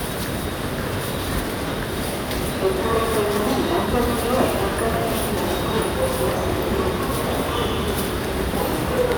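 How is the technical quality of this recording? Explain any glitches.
No technical faults can be heard anywhere in the recording; the signal stays continuous and intact, without interruption or damage.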